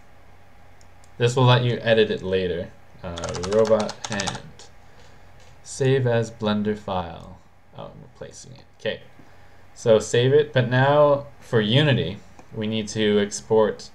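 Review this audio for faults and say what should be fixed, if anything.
A sudden gain jump from 7.01 s to 9.01 s drops the sound and background noise together by about 5 dB, likely from digital gain applied without a ramp. Apply gain changes through a short fade or smoothing ramp.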